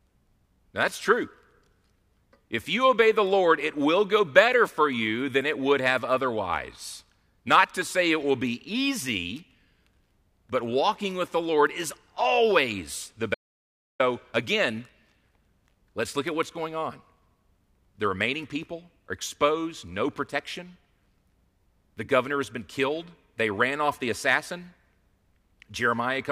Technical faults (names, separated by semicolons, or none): audio dropout to silence